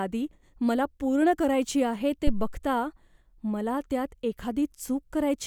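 At 2.27 s the speech is hit by a phantom power thump lasting until 2.62 s. Phantom power, or a similar supply, was switched on a live input. The sudden voltage step passed through the coupling capacitors into the signal path. It is heard as a deep, low-frequency thud under the speech. The peak reaches about -12 dBFS. The thump then dies away quickly, with a decay of roughly 78 ms.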